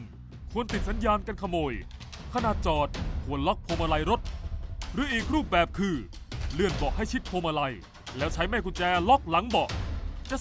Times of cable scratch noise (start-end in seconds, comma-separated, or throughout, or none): none